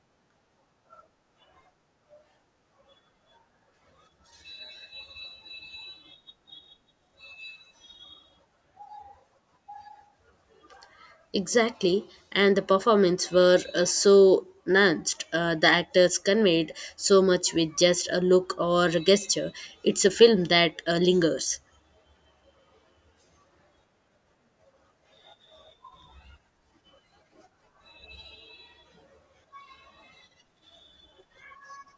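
Speech recording with no audible technical faults.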